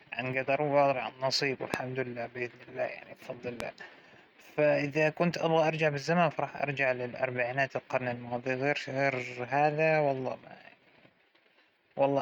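Loud pops at 1.74–1.76 s and 3.60–3.62 s, roughly 20 and 15 dB above the speech and likely electrical transients, show as sharp waveform spikes and thin full-band spectrogram lines.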